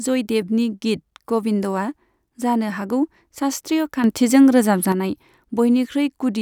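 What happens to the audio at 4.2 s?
At 4.2 s the speech sits inside a sudden gain jump. It runs from 4.04 to 4.92 s, right after "जानो हागौ शास्त्रीय". The level rises by about 6 dB. Voice and background noise step up together. The likely cause is a gain change applied instantly, without a ramp.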